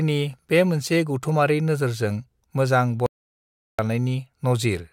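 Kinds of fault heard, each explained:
Audio dropout to silence: at 3.06 s the speech cuts off mid-flow into silence, with no room tone at all, until it resumes at 3.79 s. About 0.73 s of speech is simply gone, likely because the input was lost while the recorder kept writing silence.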